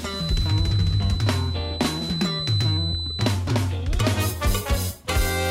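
From the start to 3.42 s, a thin, steady feedback whistle at 4 kHz sits roughly ten decibels under the sound and swells and fades slowly in level. A loudspeaker-to-microphone loop likely hovered just short of runaway. Unlike full howl-round, the tone never builds into a howl.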